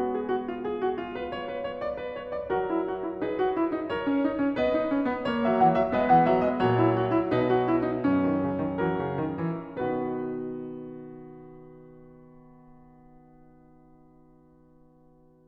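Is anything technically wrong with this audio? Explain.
No, nothing in this music stood out as technically wrong on listening.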